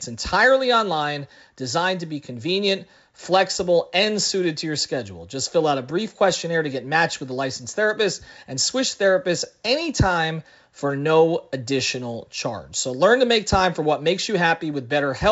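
A speech recording carried over G.722 wideband telephone coding at 64 kbit/s, with nothing technically wrong with it.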